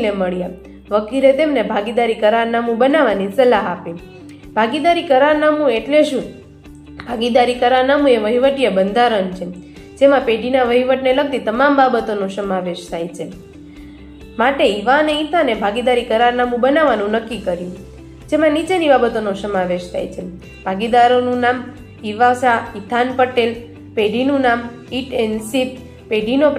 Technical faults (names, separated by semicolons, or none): none